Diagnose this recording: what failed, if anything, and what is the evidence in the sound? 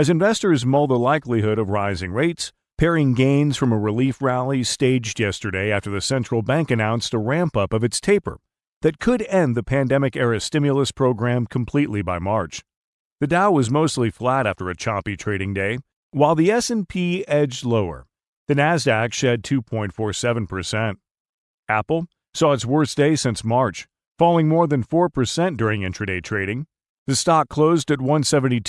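Nothing failed; no fault is audible in this speech.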